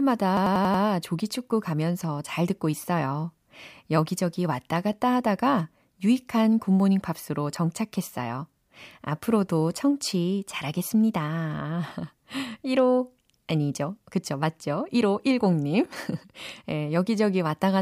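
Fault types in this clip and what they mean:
System hang loop: from 0.37 to 0.84 s the speech stops moving forward and a single 92.9 ms slice repeats five times, a machine-gun stutter at about 10.8 Hz. The computer or its audio driver stalled, so nothing refilled the output, and the sound hardware kept replaying the same ring buffer. The loop length fits a 4096-sample buffer. Once the system recovered, playback picked up again with essentially no audio missing.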